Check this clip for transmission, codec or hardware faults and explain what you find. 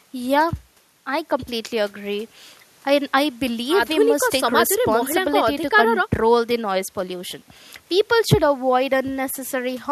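Checking this clip turns up no fault to explain.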